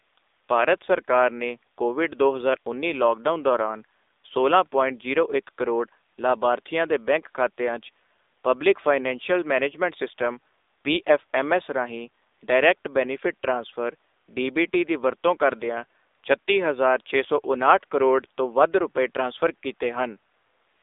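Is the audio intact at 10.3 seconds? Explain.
No. At 10.3 seconds, as throughout the speech, the AMR narrowband mobile codec confines sound to about 300 Hz to 3.7 kHz and rebuilds it from a vocal-tract model. The result is a plainly buzzy, synthetic texture that fits a 7.4 kbps mode, unlike a simple telephone band filter, which would only dull the sound.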